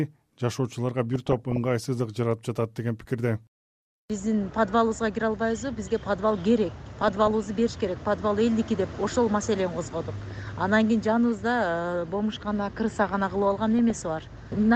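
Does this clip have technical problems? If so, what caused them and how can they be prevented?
Yes. Weak DAB reception let bit errors slip past error correction into the MP2 audio, corrupting samples and scale factors so individual sub-bands leap in level. This DAB burbling is heard at 1.15–1.58, 7.02–7.44, 10.24–10.50 and 13.79–14.07 s. A better-placed antenna or stronger signal prevents it.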